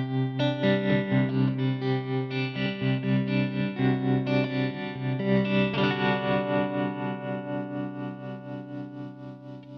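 No technical faults can be heard anywhere in the recording. Nothing in it points to trouble in the capture, processing or playback chain.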